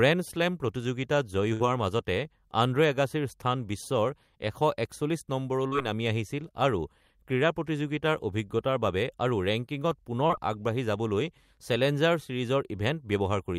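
At 1.53 to 1.62 s a burst of packet loss stalls the speech. The receiver stretches the last sound for about 63 ms, fading it as a held buzz or hiss, then resumes about 60 ms further on. The audible jump past missing audio sets it apart from a mere blur.

Two short concealed packet losses follow, at 5.68 to 5.74 s, just before "নামি আহিছিল আৰু", and at 10.28 to 10.31 s. Each gap of 38 ms and 19 ms is patched by continuing the preceding sound, giving a quick smear or wobble rather than a held, decaying tone.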